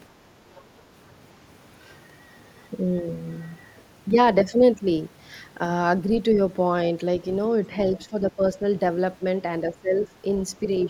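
Speech, with a couple of faint scraps of the other side's voice leaking through at 0.55 to 0.63 s and 6.12 to 6.18 s, sitting about 30 dB under the talker, likely echo the canceller missed. Later the talker's speech gets suppressed in double talk, dipping at 7.69 to 7.78 s, 8.05 to 8.59 s and 9.62 to 10.08 s, deepening to about 15 dB, likely as the canceller ducks everything while both ends talk.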